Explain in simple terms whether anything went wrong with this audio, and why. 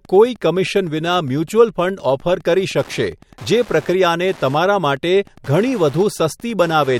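Something did go wrong. Wi-Fi interference runs under the speech from start to finish: a steady ticking about ten times a second, quieter than the speech but always present. A Wi-Fi radio sitting close to the recording equipment sends a short beacon signal every 102.4 ms, and the audio circuit picks up that radio energy and turns it into sound, producing one tick per beacon.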